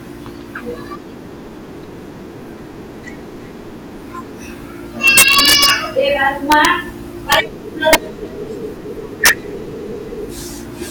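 Integer overflow hits the speech at 5.08 to 5.70 s, 6.52 to 6.65 s, 7.32 to 7.35 s, 7.93 to 7.95 s and 9.26 to 9.29 s. Peaks driven about 1 to 6 dB past the integer limit wrap to the opposite sign instead of saturating, so each excursion jumps across the full range. The result is harsh, violent cracks on the loud syllables, sharper than clipping, with the longest run around 5 s.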